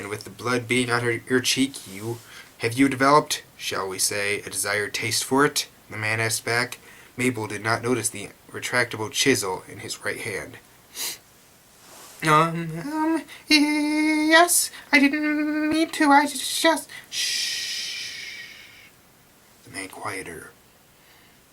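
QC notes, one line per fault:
15.72 s, block of digital silence: a 5 ms stretch drops straight to silence and back with no fade, so the gap is heard as a short tick or dip rather than as silence.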